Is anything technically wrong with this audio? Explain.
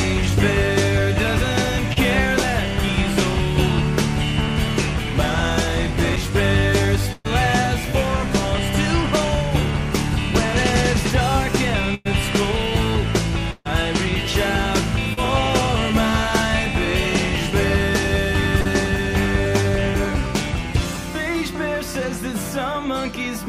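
Yes, there are three kinds of fault.

At 1.93 to 1.98 s, 15.13 to 15.19 s and 18.61 to 18.67 s, brief smears or wobbles are heard. This is short concealed packet loss: the receiver extended the last sound for 27 to 41 ms to cover 20 to 40 ms that never arrived.

At 6.16 s there is a tick, a very brief mute and then an abrupt jump. This is a CD skip, where the laser leapt to another turn of the spiral and play resumed from there.

At 7.13 to 7.26 s, 11.94 to 12.07 s and 13.51 to 13.67 s, the sound freezes into a held buzz or fading hiss, falls silent for 10 to 20 ms and then resumes further on. These are bursts of packet loss. In each one, 100 to 140 ms of audio was lost and replaced with concealment that faded out.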